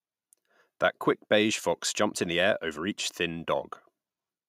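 No audible technical faults.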